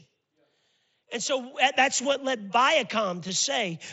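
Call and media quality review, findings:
Concealed Bluetooth headset packet loss at 3.27 s: a brief filled-in patch of about 15 ms, consistent with two lost headset packets over the mSBC link. The receiver repeats a well-matched stretch of the preceding waveform, so there's no silent gap or click as in a plain dropout.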